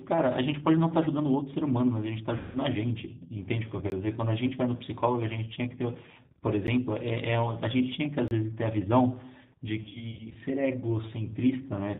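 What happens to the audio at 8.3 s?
From 8.28 to 8.31 s the program most likely failed to deliver audio in time, so a 30 ms block of samples went out as zeros: a block of digital silence. The sound drops straight to nothing and returns with no fade, leaving a brief hole, heard as a short gap in the speech rather than a pause.

Around that gap, and through the whole clip, the speech carries plainly audible G.729 codec damage. The codec rebuilds each 10 ms frame from a vocal tract filter, a pitch predictor and a handful of pulses rather than sending the waveform. The roughness points to its 8 kbit/s rate. Nothing above 4 kHz survives, so the speech sounds muffled and band-limited, with a slightly rough, synthetic texture on the parts that remain.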